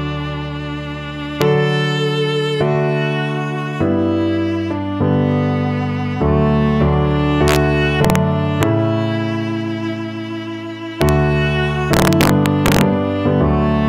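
Integer overflow cracks hit at 1.42, 7.48 to 7.56, 8.05 to 8.16, 8.63, 11.02 to 11.09, and 11.93 to 12.81 s. Peaks pushing just past full scale, up to about 3 dB over in the last stretch, wrap to the opposite sign instead of limiting, giving harsh snaps far nastier than clipping.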